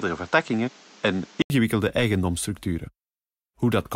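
From 0.0 to 1.5 s the speech is dull and narrow, with nothing above 8 kHz and a steady background noise roughly 30 dB below it. At 1.5 s an 80 ms silence falls, and the sound then opens up brightly at the same loudness. The likely cause is an input switched to a poorer device that was later restored. A plain low-pass filter wouldn't bring its own noise floor, and wouldn't break off with a gap at the changeover.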